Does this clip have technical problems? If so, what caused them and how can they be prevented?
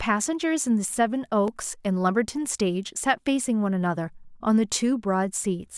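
Yes. Clock drift buffer slips cause regular clicks every 1.4 s from 1.48 to 5.66 s. These are likely from mismatched device clocks, roughly 500 ppm apart, dropping or repeating about 15 samples each time. Preventing this means locking all devices to one shared clock or using adaptive resampling.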